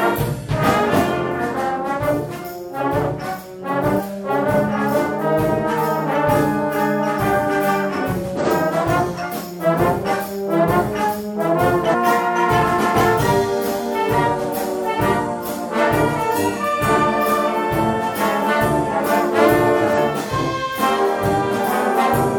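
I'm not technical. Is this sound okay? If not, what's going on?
No. Damaged data in a compressed stream causes brief chirps or blips at about 3.95, 8.36, 11.89, 13.15 and 19.93 seconds, each lasting around 50 to 60 milliseconds. Parts of the compressed file were corrupted, so the player misreads those pieces.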